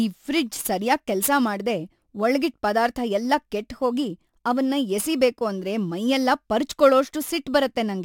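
Right through the speech there's crude rate conversion: 44.1 kHz to 48 kHz by repeating nearest samples, unfiltered, leaving a gritty, inharmonic fizz roughly 25 dB down.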